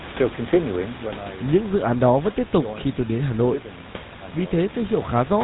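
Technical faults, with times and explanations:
Throughout, GSM full-rate codec: the speech passes through a low-rate vocal-tract coder that rebuilds the signal from a simple filter model, excited by a regular pulse train keeping just one excitation sample in three. Nothing above 4 kHz survives, so the speech is dull and band-limited, and the coarse excitation gives it a buzzy, gravelly roughness, plainly audible here and consistent with the 13 kbps full-rate coder. The room noise, about 15 dB below the speech, passes through the same coder.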